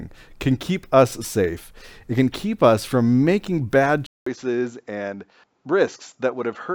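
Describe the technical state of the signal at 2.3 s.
At 2.3 s the signal is intact, with no audible fault at that moment.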